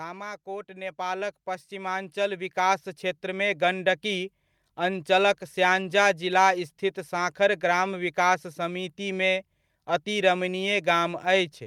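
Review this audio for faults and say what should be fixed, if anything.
Automatic gain rising runs from 0.44 s to 5.14 s, ending just before "स्याङ्जा जिला स्थित साँखर". The gain control judged the incoming level too low and kept pushing its gain upward over those 4.7 seconds, about 13 dB in total. Because the boost applies to everything the microphone picks up, the speech and the room background grow louder together in a slow swell rather than a sudden jump. To prevent it, set a fixed input gain suited to the talker's level and disable the automatic gain control, or give it a slower release and a tighter maximum boost.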